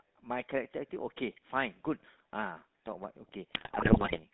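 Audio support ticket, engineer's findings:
GSM full-rate codec, whole clip. Buzzy, gravelly roughness on speech, plainly audible. Band limited to roughly 150 Hz to 3.7 kHz. Pulse-driven vocal tract model discards fine excitation detail. Fits a 13 kbit/s GSM full-rate stream.

GSM bit errors, 3.52 to 4.19 s. Squawks, pops and gargling through the last stretch. Corrupted filter, pitch and gain parameters reaching the decoder. Spectrum bends and level jumps frame by frame. Points to a weak radio link, error rate around 4%.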